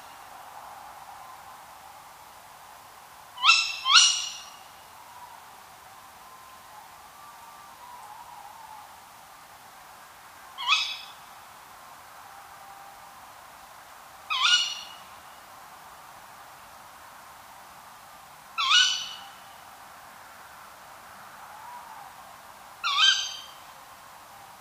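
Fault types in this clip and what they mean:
No faults can be heard anywhere in the audio.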